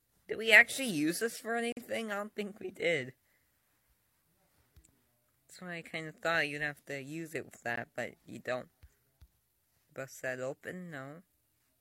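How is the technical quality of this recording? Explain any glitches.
The recording has two dropouts caused by a gap between stream segments. Segment timestamps left small holes about 6 s apart, which the player filled with silence: hard-edged breaks at 1.72–1.77 s (about 47 ms) and 7.76 s (about 15 ms). No audio is lost.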